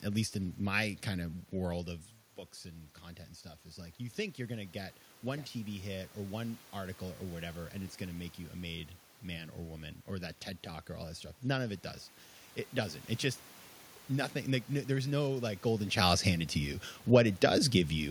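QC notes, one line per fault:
3.63–7.54 s and 9.27–11.87 s, automatic gain rising: the input dropped by about 11 dB, so the gain control slowly raised its gain by about 4 dB, then by about 3 dB later, and voice and room noise swell up together.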